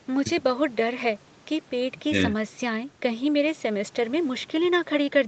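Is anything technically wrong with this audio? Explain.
No, nothing here is a fault: the speech simply tops out around 8 kHz, which is just what you'd expect from normal call microphone processing and a WebRTC call path carrying it at wideband.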